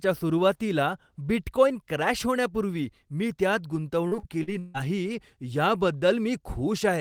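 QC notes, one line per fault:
4.07–4.77 s, repeated packet loss (robotic sound): just after "क्रॅश होण्यापूर्वी मी त्यात" the speech turns choppy, with four holes of up to 150 ms. The last sound is stretched to cover them, patching about 38% of the stretch.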